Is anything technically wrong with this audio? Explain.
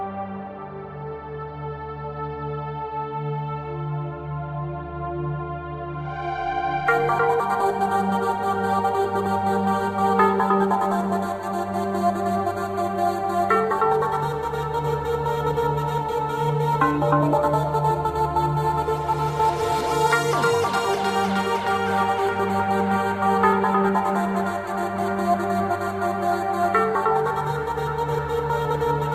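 No, nothing technically wrong can be heard anywhere in this audio.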